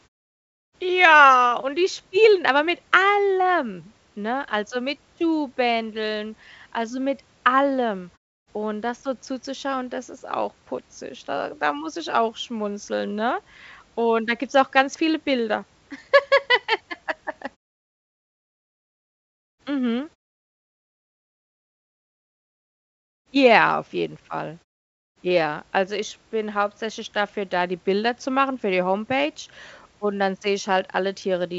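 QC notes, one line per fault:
Nothing to flag here: it's speech over a G.722 call path at 64 kbps, so there's nothing above 8 kHz, and the background drops away in the pauses just as that setup is meant to do.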